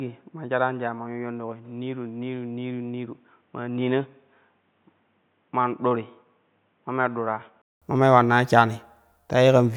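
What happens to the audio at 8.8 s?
Nothing goes wrong at 8.8 s; the audio plays through that moment intact.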